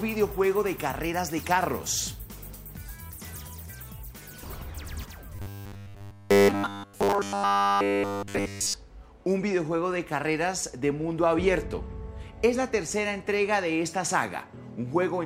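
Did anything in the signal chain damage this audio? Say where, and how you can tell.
Yes, at the driver or buffer stage. From 5.36 to 8.74 s there is robotic sound from repeated short buffers, a metallic 100 Hz buzz. A starved buffer likely looped one 10 ms chunk throughout. The waveform shows identical 10 ms cycles, and the spectrogram shows flat harmonics every 100 Hz.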